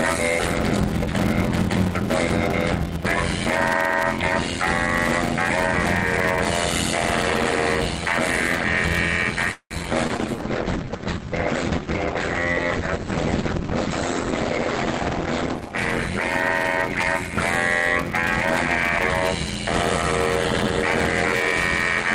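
Block size mismatch (padded) runs throughout: each block is short and zero-filled to a length that fits a 512-sample read, giving an 86.1 Hz buzz and audio slowed to 0.625 times normal speed.

Repeated packet loss (robotic sound) from 9.51 to 10.21 s leaves four holes patched by stretching the preceding sound, the longest 193 ms, so about a third of the span sounds choppy.

A call bitrate drop from 10.04 to 17.37 s dulls and roughens the sound. The top end narrows from about 20 kHz to 8 kHz, which points to the encoder falling from roughly 48 to 9 kbps.

Jitter buffer slow-down from 10.36 to 11.31 s repeats small pieces of sound to add 66 ms, so the audio drags at 94% speed at the same pitch.

Jitter buffer speed-up from 15.59 to 15.73 s cuts a few tens of milliseconds, briefly hurrying the audio to 125% speed without any pitch change.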